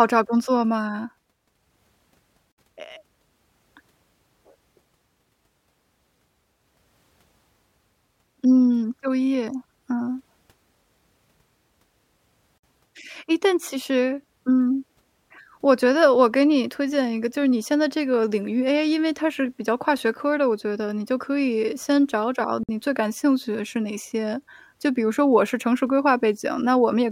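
Gaps at joins of encoded pieces fall at 2.52 s (62 ms), 12.58 s (54 ms) and 22.63 s (54 ms), every 10 s. The speech was encoded in separate pieces and joined untrimmed, so leftover encoder delay and end padding open silences with smeared edges before the speech resumes.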